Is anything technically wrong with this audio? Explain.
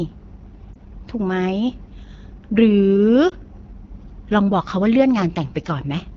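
Yes, there are two things going on.

The whole clip has the sound of the AMR wideband (HD Voice) codec at a low rate. AMR-WB models the vocal tract and excites it with pulses up to 6.4 kHz, then fills 6.4 to 7 kHz with shaped noise. Here the speech comes out noticeably rough and raspy, and the roughness is plainly audible. That fits one of the bottom modes, around 8.85 kbit/s, where the codec has too few bits to model the speech cleanly.

There are also two lost AMR speech frames, at 0.73 to 0.76 s and at 3.29 to 3.33 s. When a frame fails its radio checksum, the decoder rebuilds that stretch from the previous good frame's pitch and vocal tract settings, with the gain pulled down. Each gap sounds like a single lost frame of about 20 ms. You get a quick dip or warble before the speech picks back up.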